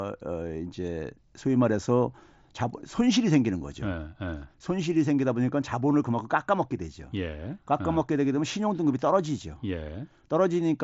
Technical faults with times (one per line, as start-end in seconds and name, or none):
none